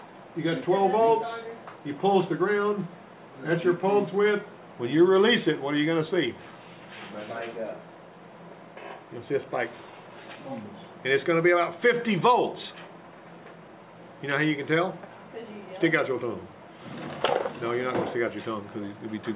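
No technical faults can be heard anywhere in the audio, and the signal stays steady and intact throughout.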